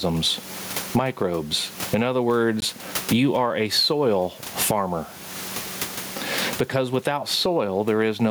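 The input gain looks likely to have been set far too high for the microphone, so a fast limiter or compressor keeps clamping it on every loud syllable and releasing it in the pauses. Throughout the speech this gain pumping swings the level by something like 25 dB. The room noise sits about 34 dB below the speech. Loud and quiet passages are pressed close together, and the speech comes across as squashed and breathing.

At 2.60 s a Bluetooth stall interrupts playback. The likely cause is interference delaying packets, so the headphones' buffer runs empty and the audio has to wait for the resent data. The result is a 17 ms drop to silence, and then the speech picks up with "you are a soil". The dropout is brief.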